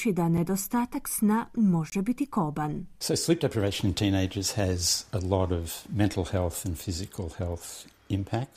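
A tick at 0.37 s and a short, hard-edged hole from 1.90 to 1.92 s, just before "biti koban", are blocks of digital silence. The speech drops abruptly to silence and returns, likely because the output buffer went unfilled. The 5 ms and 21 ms gaps fit 256- and 1024-sample buffers.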